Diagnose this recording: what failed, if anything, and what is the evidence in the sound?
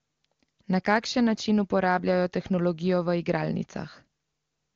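Nothing failed; no fault can be heard anywhere.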